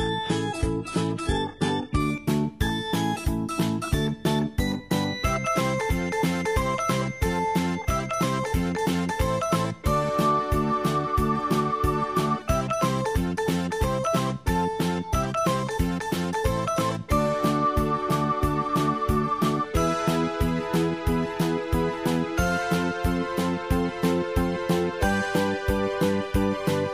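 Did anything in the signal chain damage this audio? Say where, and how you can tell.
Yes, at the playback stage: an adaptive stream starting at a low bitrate. From 0.0 to 2.0 s the top end is thin and partly synthetic, with nothing above 11.5 kHz and stronger codec artefacts, which fits a 12 kbit/s HE-AAC start. At 2.0 s the quality jumps with no gap, fitting a switch to roughly 96 kbit/s AAC-LC once the player had measured the connection. On a spectrogram the band ceiling rises abruptly at 2.0 s, while the waveform stays continuous.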